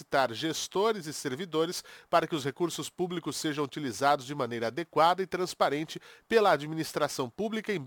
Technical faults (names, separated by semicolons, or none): crude rate conversion